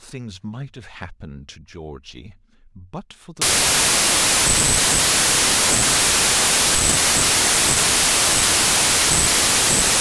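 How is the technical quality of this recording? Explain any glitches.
Rough from 3.42 s to the end: a wrong sample width fault, packed 24-bit data read as 16-bit, so the speech slows to two-thirds speed, drops in pitch and sinks under loud noise.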